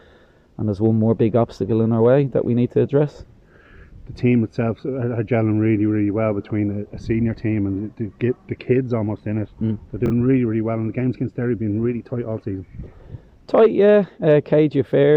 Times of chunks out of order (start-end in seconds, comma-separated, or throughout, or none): 10.06-10.10